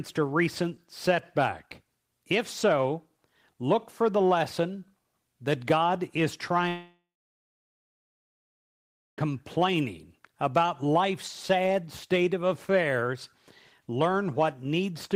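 A long network dropout, likely a break in packet delivery, cuts 2.5 s of audio from 6.68 s to 9.19 s. The last sound is stretched into a brief fading buzz, then 2.13 s of near-silence follows before the audio resumes beyond the gap.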